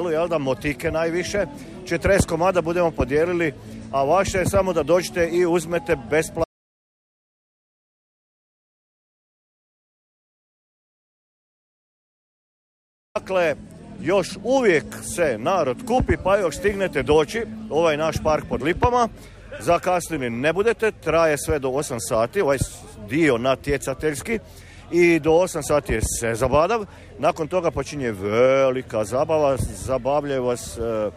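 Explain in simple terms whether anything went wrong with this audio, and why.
Something did go wrong: there's an audio dropout to silence from 6.44 s to 13.15 s. The sound cuts out completely for about 6.7 seconds, with not even background hiss. That likely means the input got disconnected or muted, so whatever happened then is lost.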